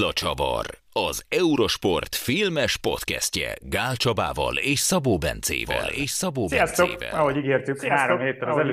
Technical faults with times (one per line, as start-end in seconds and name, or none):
5.65-8.73 doubled audio track